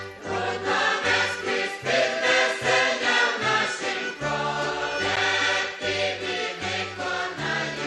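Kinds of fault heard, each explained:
Gap between stream segments at 5.16 s: a hole of silence about 10 ms long cuts into the sound with hard edges. The audio stops and restarts abruptly instead of fading. It falls at the join where one 4.0 s stream segment hands over to the next. The two segments' timestamps don't meet, and the player fills the space between them with silence. No audio is lost, so everything after the gap arrives slightly later.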